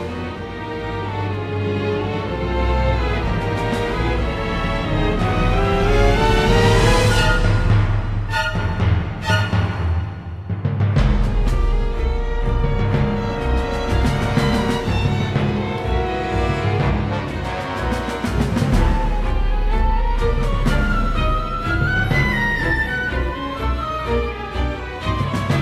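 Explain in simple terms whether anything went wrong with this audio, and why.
Nothing went wrong here; there are no faults to hear.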